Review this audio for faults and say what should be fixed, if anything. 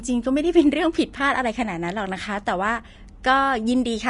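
The whole recording carries plainly audible damage from lossy compression, likely Vorbis compression at a low quality setting. Nothing reaches above 10.6 kHz, so the top of the band is simply gone. What treble remains sounds hissy and grainy. The encoder kept only a smooth outline of the upper spectrum and filled the fine detail with coarse noise of similar energy. Consonant onsets blur and tones turn rough. This degree of damage fits a bitrate around 35 kbps. To prevent it, encode from the original at a much higher Vorbis quality setting or use a lossless format.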